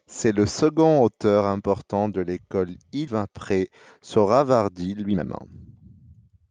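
At 3.07 s the speech suddenly skips ahead. Roughly a second of audio is gone, and the two sides of the jump are butted together with no real gap, so it sounds like a hard splice rather than a pause. That's a classic skip ahead: later audio was already queued, and the missing chunk was either lost in transit or thrown out when the jitter buffer overflowed, cutting the delay by about a second in one go.

From 3.17 s to the end, the speech runs noticeably quick, at about 114% speed, while the pitch stays where it was. That's a jitter buffer speed-up. The buffer was sitting on more audio than it wanted, so the receiver kept snipping out tiny pitch-period-sized slices, one after another, to catch up. All told, around half a second gets trimmed, and the delivery comes across as hurried rather than higher-pitched.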